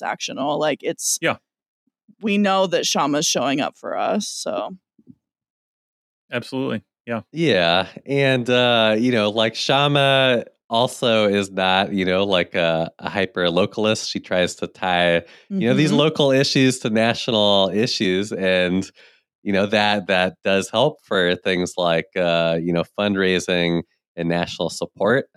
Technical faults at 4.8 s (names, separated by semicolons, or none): none